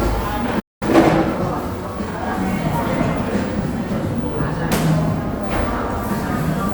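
At 0.59 s the sound cuts out abruptly mid-flow and stays silent until 0.83 s, a gap of a little over 0.2 s, before resuming where it broke off. This is a playback stall. The likely cause is the player running out of buffered data, or its output thread being blocked, so nothing reached the output until it recovered and picked up again from the point where it had stopped.

From 0.83 s to 2.23 s the audio sounds hurried, running at about 1.15 times normal speed while keeping its normal pitch. This is time-compressed catch-up. Having fallen behind during the stall, the player works off its backlog by cutting out small slices of audio and cross-fading across the joins. The speed rises without the pitch rising.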